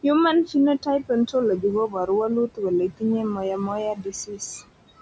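Throughout the speech, noise suppressor artifacts are audible. The suppressor pulls the steady room noise down by about 18 dB frame by frame, so the noise sinks between phrases and resurfaces under the speech. This differs from a plain gate, whose noise floor would simply switch on and off.

Speech cut by the noise suppressor follows at 1.88 to 2.09 s (dips of about 10 dB), 2.88 to 3.03 s (about 18 dB) and 3.95 to 4.41 s (about 15 dB). In each, the suppressor mistook quiet speech for noise and turned it down with the background. Roughly a tenth of a second is lost in each of the first two, and about a third of a second in the last, so soft sounds come out swallowed. Unlike a dropout, the speech thins rather than vanishing into silence.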